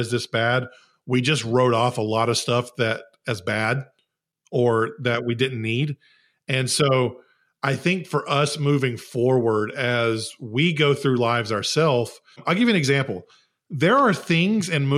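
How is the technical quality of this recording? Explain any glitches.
No technical glitches can be heard in the recording: the speech signal stays intact and continuous, with nothing that points to a fault in capture, transmission or playback.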